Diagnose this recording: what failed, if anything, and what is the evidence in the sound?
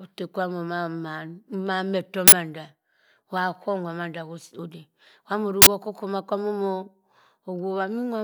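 Driver/buffer stage: uninitialised buffer. 46 ms bursts of digital noise at 2.28 s and 5.62 s are stale memory played as samples, which fits a 2048-sample block.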